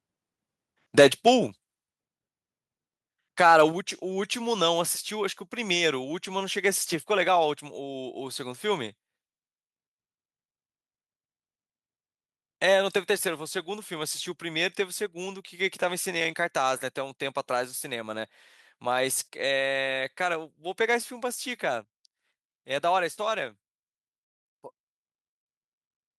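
At 2.01 s the whole recording drops in level at once, by about 4 dB. The voice and the background fall together, with no fade. This is a microphone volume stepped down. The likely cause is the call software judging the input too hot and cutting the device's input volume in a single step. The drop stays in place afterwards.

From 3.4 to 3.62 s the loudest syllables turn harsh and crackly. This is microphone overload. The peaks push past the converter's limit by about 2 dB. Their tops are sliced flat, and a small share of the samples, roughly 2 percent, are clipped. The likely cause is an input volume still set too high for those peaks.

At 3.72 s, just after that distorted burst, the level steps down again, by about 5 dB. It is another microphone volume stepped down. The likely trigger is the clipping just before it, with the software pulling the input down once more.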